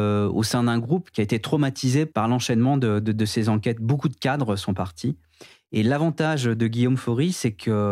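Nothing in the speech stood out as a technical problem on listening.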